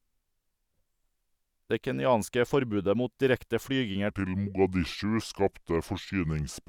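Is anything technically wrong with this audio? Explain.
Yes. From 4.10 s to the end, the speech has a section at the wrong speed: it plays at 0.775 times its recorded rate, likely because that stretch was run against the wrong clock. Slowing the playback stretches every waveform, so tempo and pitch fall together, and the speech turns deep and sluggish, roughly four semitones lower. Because timing and pitch shift as one, this is a speed fault, not a pitch-shift effect or a talker simply slowing down.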